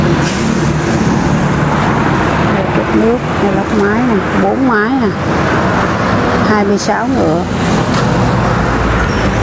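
Gain pumping runs through the whole clip. The gain swings by around 10 dB, squashing loud and soft parts together. The likely cause is input gain set far too high, with a fast limiter repeatedly clamping it back. Nothing is heard above 8 kHz, which fits a wideband call codec such as G.722.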